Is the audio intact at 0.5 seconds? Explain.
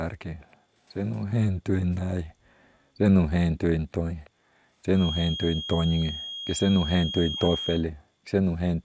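No. From 0.41 to 0.56 s there is an echo leak: a very faint copy of the speech arrives about 323 ms late. It is likely caused by a far-end loudspeaker whose echo canceller let part of the microphone pickup through and back into the call.

Immediately after, from 0.57 to 0.74 s, the background is gated by the echo canceller. It clamps the microphone while the loudspeaker plays, so the room sound drops by about 40 dB for roughly 150 ms before recovering.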